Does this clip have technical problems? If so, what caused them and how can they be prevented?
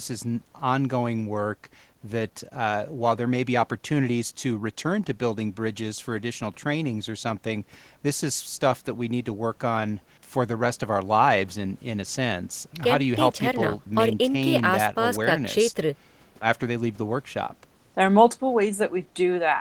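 No, no technical faults.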